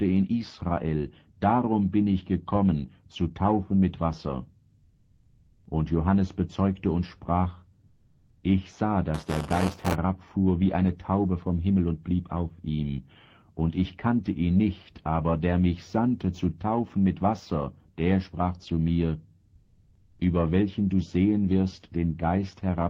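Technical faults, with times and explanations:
7.87–8.43 s and 19.55–20.19 s, comfort noise in place of the background: the real background drops out and is replaced by steady, featureless noise, quieter by about 3 dB and about 7 dB. This is likely Opus discontinuous transmission. On a spectrogram it shows as smooth, even bands without texture.
9.14–9.94 s, buffer tearing: a robotic 200 Hz buzz appears where roughly a tenth of each 5 ms period repeats audio from about 15 ms earlier. The waveform shows hard joins on both sides of the repeated part inside every period.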